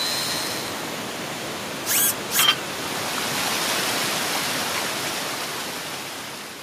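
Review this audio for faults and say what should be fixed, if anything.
Nothing here needs fixing; no faults were heard.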